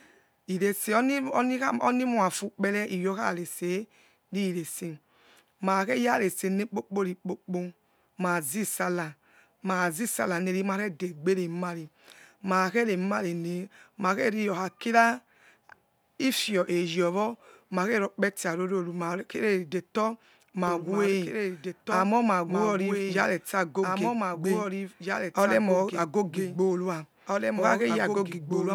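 From 20.68 s to the end, the speech carries a doubled audio track: a second full-band copy of the same material running about two seconds behind and somewhat quieter, roughly 5 dB down. It cuts in abruptly rather than building up, and has no decay or room colouring, so it reads as a clean overlapping repeat rather than an echo. The likely cause is the signal being captured twice, once through a slower path, or an edit leaving two offset copies in the mix.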